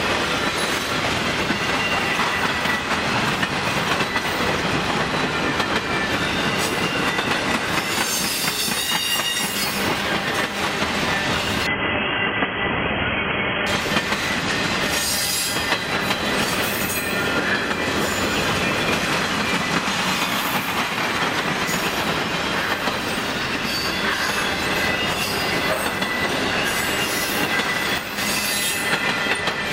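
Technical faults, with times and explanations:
11.67–13.67 s, adaptive stream at a lower bitrate: nothing remains above 3.4 kHz and artefacts rise. The abrupt switch points to a drop from about 96 to 16 kbit/s.
27.98–28.18 s, sudden gain jump: sound and background fall together by about 6 dB with no fade. The likely cause is a digital gain change applied without a ramp.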